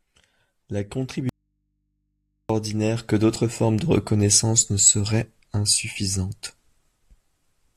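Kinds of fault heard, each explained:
Audio dropout to a faint residue: the wanted signal likely stopped reaching the path for a moment while the chain after the break stayed live, so the input sat open and picked up mains hum. In this speech the voice cuts off abruptly at 1.29 s and is gone for about 1.2 s. Only a low hum, roughly 50 dB below the speech, fills the gap. The voice then snaps back at 2.49 s on "que d'autres formes de", with no fade either side.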